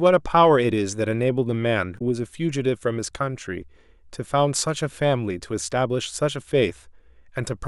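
At 1.95 to 2.01 s, and again at 5.66 to 5.68 s, the speech breaks briefly. Both are damaged data in a compressed stream. Corrupted bytes made the decoder misread frames and lose sync until it found the next valid header.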